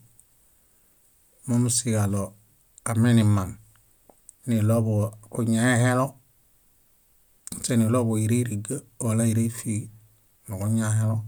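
No technical faults can be heard in this recording.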